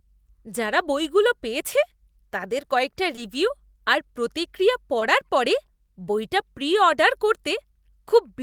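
At 3.15 to 3.19 s, and again at 4.99 to 5.03 s, there is short concealed packet loss. Each time, about 20 ms of the speech arrived too late to be decoded. The receiver filled that gap with a guess extended from the sound just before it, then crossfaded back into the real signal. Each repair is heard as a brief smear or wobble in the speech.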